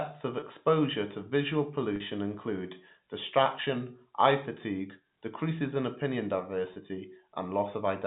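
Short buzzy, held-over blips at 0.40–0.42 s, 1.96–2.00 s after "to visual", 3.64–3.66 s before "eye fatigue decreases in", and 6.74–6.76 s after "fatigue decreases in opinion" are packet loss with pitch repetition. About 20 ms of speech was lost each time, 40 ms at 1.96 s, and was filled by repeating the last pitch period.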